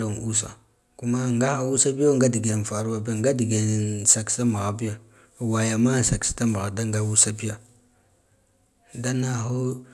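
Throughout, a resampler restarted on every block handles 100 ms chunks blind to their neighbours, leaving 10 Hz ticks during speech: evenly spaced vertical spectrogram lines.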